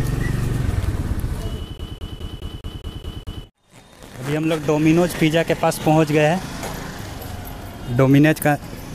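From 1.78 to 3.44 s the CD gets stuck on one turn: a 208 ms slice repeats eight times, the laser jumping back each revolution, giving that quick, even skipping stutter.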